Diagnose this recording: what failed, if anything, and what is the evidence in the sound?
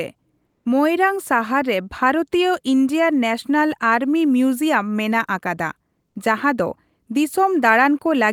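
Codec: discontinuous transmission likely halted sending during the pause, so comfort noise in place of the background runs 0.46 to 0.65 s, featureless and about 1 dB quieter.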